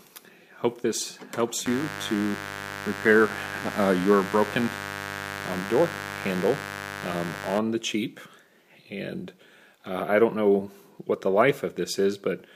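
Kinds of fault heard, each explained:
Mains buzz: from 1.66 s to 7.58 s a steady, raspy buzz sits under the sound, roughly 10 dB below it, then stops. Switching spikes from something like a dimmer or rectifier, or an unshielded cable run, are getting into the signal path twice per cycle of the 50 Hz supply. That sharp, repeating pulse train produces a dense stack of 50 Hz harmonics reaching up into the kilohertz range, which gives the buzz its gritty edge rather than a smooth hum.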